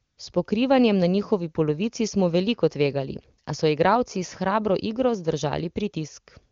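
A speech clip that opens with a short patch of AMR comfort noise from 0.03 to 0.17 s. The phone stopped sending frames for about 140 ms, so the real background gives way to smooth synthetic hiss.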